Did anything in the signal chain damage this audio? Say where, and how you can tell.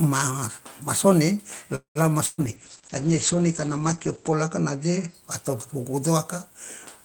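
Yes. A call audio freeze runs from 1.75 to 2.03 s: the last sound is stretched into a fading buzz or hiss, then about 0.11 s of silence, and it resumes with nothing lost but roughly 0.2 s late. This likely comes from a network stall draining the receiver's jitter buffer.

A burst of packet loss follows at 2.26 to 2.41 s. Here 120 ms of audio is gone, and the receiver bridges it by continuing and fading the preceding sound. The audio then picks up further along, so the content in that span is missing, not delayed.

A call bitrate drop starts at 2.40 s and lasts until 5.20 s. The bandwidth estimate fell and the Opus encoder went from 32 to 10 kbps, sitting at the floor for about 2 s. High frequencies are cut from 20 kHz to 8 kHz, leaving the sound muffled and coarsely coded.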